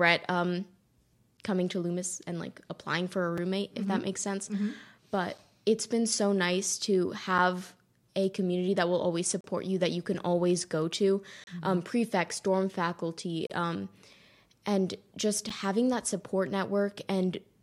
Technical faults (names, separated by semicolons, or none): gap between stream segments